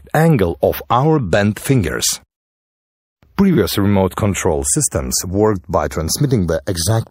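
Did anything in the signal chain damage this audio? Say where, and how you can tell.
Yes: channels drifting apart at the converter stage. Two devices on separate clocks, off by around 40 ppm, slide to a fraction of a millisecond apart; mono summing gives slow flanging throughout.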